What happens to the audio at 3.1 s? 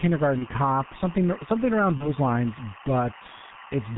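At 3.1 s, two faults are active. Both run through the whole clip rather than starting at that moment.

The first is timecode bleed. A linear timecode signal running at 24 frames per second has leaked from a neighbouring track or cable into the audio path. Its square wave flips between tones near 1 kHz and 2 kHz, and it sits roughly 20 dB below the speech. At 3.1 s this comes through as a steady, chirping warble beneath the voice that doesn't follow the speech at all.

The second is the G.723.1 codec. The speech has been squeezed through this low-rate telephony codec, and the damage is heavy. The codec works in 30 ms frames and its voice model adapts slowly, and the result fits a bitrate of around 6 kbit/s. It also discards everything above 4 kHz. At 3.1 s the speech sounds muffled and hoarse, with consonants smeared and indistinct.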